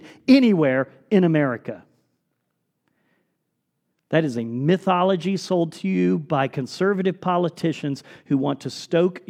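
Nothing stood out as a technical fault on listening to this speech recording.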